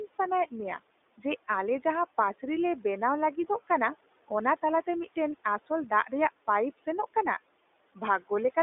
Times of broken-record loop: none

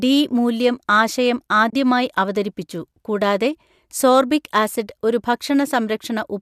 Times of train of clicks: none

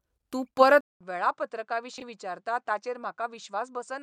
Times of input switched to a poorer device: 0.81-4.03

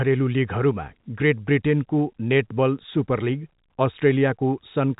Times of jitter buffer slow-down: none

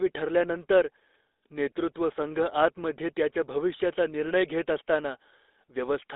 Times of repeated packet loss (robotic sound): none

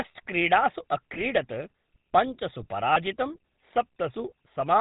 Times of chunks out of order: none

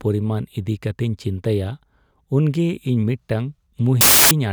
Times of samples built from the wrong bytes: 4.01-4.31

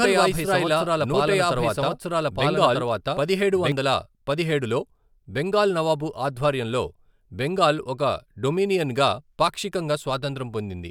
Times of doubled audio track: 0.00-3.72

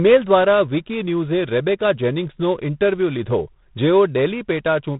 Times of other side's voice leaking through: none

